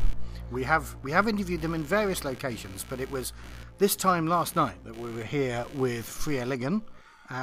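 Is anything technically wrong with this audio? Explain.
Yes. Computer activity noise runs throughout: a buzz pulsing at around 70 Hz, roughly 25 dB below the signal, from computer load changes disturbing the audio circuit's shared ground.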